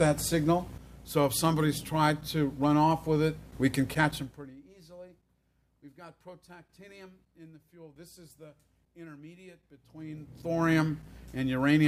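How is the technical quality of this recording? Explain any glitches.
There is one glitch, a burst of zipper noise near the end.

Zipper noise, 9.80 to 10.75 s: here the level is moved in coarse 1 dB jumps, roughly forty per second, with no smoothing between them, across a change of around 25 dB. Each jump is a tiny discontinuity in the waveform, so the sound carries a fine ticking, zipping texture for that short stretch while the level moves.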